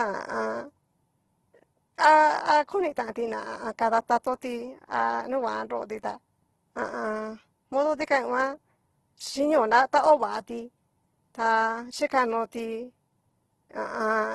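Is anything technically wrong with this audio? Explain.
Yes. Opus compression damages the speech for the whole clip. Heavy artefacts make the sound rough and grainy, with voiced tones turned noisy, likely from Opus's CELT music mode at a starved bitrate near 12 kbps. To fill starved bands, the codec folds lower ones or adds noise. A spectrogram shows a hard ceiling at 12.2 kHz and smeared, noise-filled bands below it.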